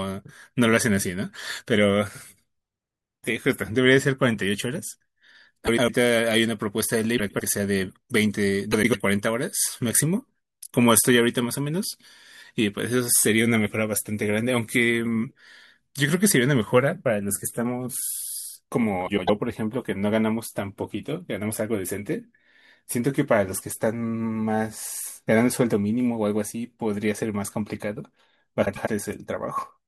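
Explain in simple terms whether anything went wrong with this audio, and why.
Yes, something went wrong: frames out of order, five times, at 5.66–5.90, 7.18–7.41, 8.72–8.95, 19.06–19.30 and 28.65–28.88 seconds. Each time, two neighbouring chunks of about 0.1 s got swapped, so the speech briefly flutters.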